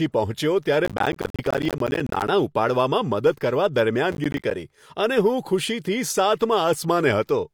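Throughout the speech, the spectrum is cut above 18.5 kHz and smeared compression artefacts remain despite the high-bitrate MP3, likely low-bitrate audio saved at a high bitrate. From 0.85 to 2.28 s, and again from 4.12 to 4.51 s, processor overload crackle tears through the sound. Missed buffers of around 10 ms drop to silence, showing as flat waveform gaps and vertical broadband stripes on a spectrogram.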